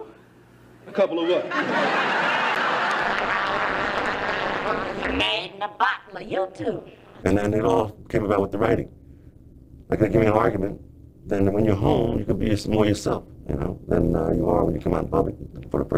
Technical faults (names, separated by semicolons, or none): overlap-add ripple